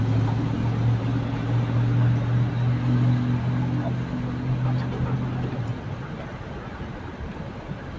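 No technical faults can be heard anywhere in this recording of sounds. It has passed through a call path, and the band stops at about 8 kHz, which fits a wideband codec such as G.722.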